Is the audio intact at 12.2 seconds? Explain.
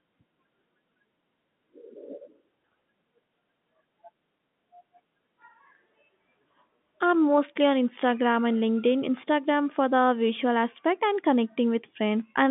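Yes, the audio is intact at 12.2 seconds, with nothing there beyond the narrow telephone band of the G.711 coding, which passes no content above about 3.8 kHz.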